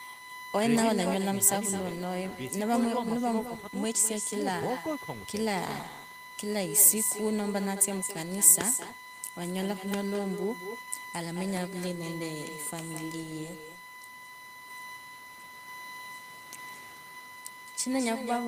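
From the start and throughout, a USB whine sits steadily under the speech. It is a fixed 1 kHz tone strongest at 2 kHz, roughly 20 dB down, unlike mains hum's lower 50 or 60 Hz pitch. Also throughout, with no canceller removing it, an echo returns about a fifth of a second late, only about 8 dB quieter and thinner. That distinct lag separates it from ordinary room reverberation.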